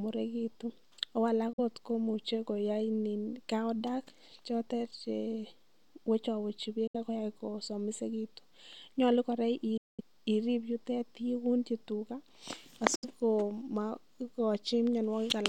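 Likely Bluetooth dropouts occur at 1.53, 6.87 (before "ak koyai kosomisegitun"), 9.77 to 10.01 (before "irib yutet") and 12.95 s. The speech cuts abruptly to silence for 46 to 209 ms as late packets are discarded, then resumes further along.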